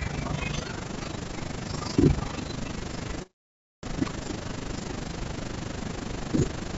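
Right through the speech there's overlap-add ripple. The frames were rejoined with uneven gain, so the level pumps about 11 dB around thirty times a second, a rough robotic flutter. Nothing reaches above 8 kHz, which fits a G.722 call codec.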